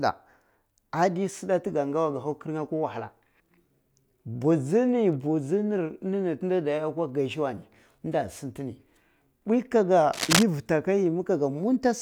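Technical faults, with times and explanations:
10.13 to 10.43 s, cable scratch noise: a dense, uneven burst of scratching and rustling lies over the speech for about 0.3 s, roughly as loud as the speech, likely from a worn cable or connector shifting so its contact resistance changed rapidly.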